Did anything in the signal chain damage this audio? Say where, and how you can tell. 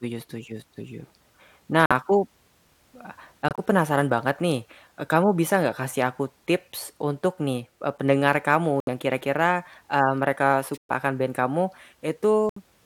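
Yes: corrupt frame muted, at 1.86–1.92, 3.49–3.59, 8.80–8.89, 10.74–10.91 and 12.49–12.56 s. The speech cuts abruptly to silence for 56 to 163 ms, spans that fit whole codec frames. The decoder rejected bit-damaged compressed frames, and playback inserted silence without shifting timing.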